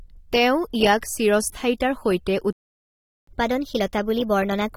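It's a short speech clip with a smeared, dull, swirly texture throughout, and the sibilants go fizzy. That's AAC compression, most likely AAC-LC at a low rate; the damage is plain enough to fit something around 32 kbps. At 2.53 s the sound just drops out and stays silent until 3.27 s, roughly three quarters of a second. That's a playback stall, likely the player running dry on data or getting its thread blocked. Then from 3.27 s to the end there's catch-up at higher speed: the player races through its backlog at 1.15 times normal, so everything runs faster and pitch climbs by about two semitones.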